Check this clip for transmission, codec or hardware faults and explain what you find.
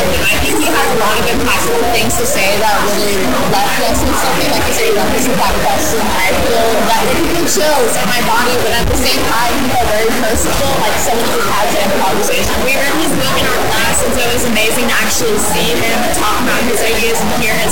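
One hardware fault is present for the whole clip: a stuck bit. From start to finish the sound carries a harsh, buzzy distortion, and the quieter stretches are not clean but filled with a gritty noise floor that sits high, at roughly -10 dBFS. The likely cause is a single data bit held at a fixed value by a broken line or converter, so about half of all sample values are pushed off by that bit's weight. Because the bit is high in the word, the error is large. Near silence it flips with the sign of small values, turning pauses into noise.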